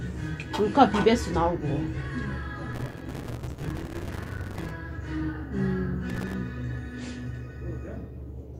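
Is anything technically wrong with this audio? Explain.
Yes. There is processor overload crackle from 2.73 to 4.71 s and again from 6.10 to 6.34 s. Audio buffers of a few milliseconds repeatedly miss their deadlines, hundreds in the first burst and dozens in the second. Each miss leaves a hard-edged gap of silence, and together these gaps produce a gritty crackle over the sound.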